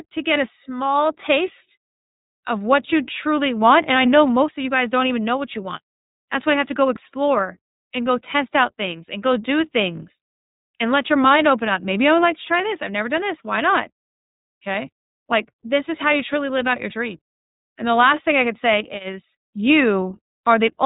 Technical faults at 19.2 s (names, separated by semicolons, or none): iLBC codec